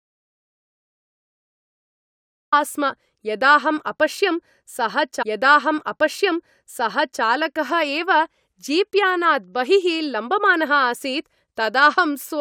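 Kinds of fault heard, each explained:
Audio dropout to silence: The clip opens in total silence until 2.52 s, with no room tone at all, and speech then enters mid-flow, likely because the input was lost while the recorder kept writing zeros. The waveform is a flat line and the spectrogram is blank.
Stream segment repeated: From 5.21 s to 7.22 s, about 2.0 s of speech plays a second time, as if the same segment were queued twice, with a small blip at the jump back. The waveform and spectrogram show that stretch duplicated side by side.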